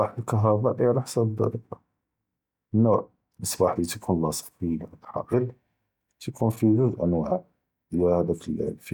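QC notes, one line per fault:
No faults detected in this speech clip; nothing to log.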